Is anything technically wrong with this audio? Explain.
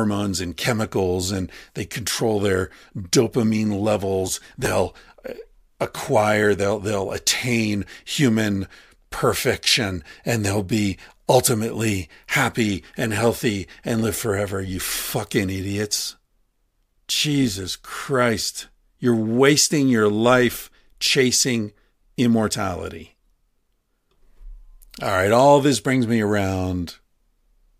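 Yes. Right after "they control their dopamine", from 4.28 to 4.66 s, processor overload crackle: around ten buffers of roughly 10 ms missed their deadline and were skipped, leaving a gritty burst of repeated hard-edged gaps rather than one isolated dropout.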